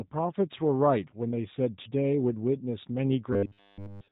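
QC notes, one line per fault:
Throughout: G.729 codec. Nothing above 4 kHz passes, so the sound is narrow and dull. Codec damage is plainly audible. Speech is rebuilt from a vocal tract filter, a pitch predictor and a few pulses per frame, not from the waveform itself. That gives a rough, slightly synthetic texture. The sound points to the reduced-complexity G.729A variant running near 8 kbit/s.
3.33 to 4.11 s: robotic sound from repeated short buffers. The last stretch of the clip, running to the very end, turns into a rigid, metallic buzz at 100 Hz. The buzz still roughly follows the speech contour. Essentially all of this span sounds repeated rather than fresh. The likely cause is playback starved of new audio, looping the last 10 ms chunk over and over. A 10 ms repeat imposes a fixed 100 Hz pitch, which matches the buzz.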